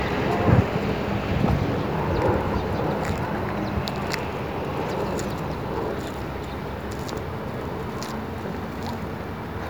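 No technical faults can be heard at any point in the audio, so there is nothing to describe in time order.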